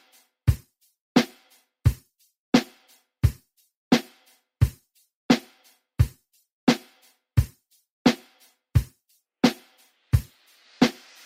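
No technical faults are audible anywhere in the audio.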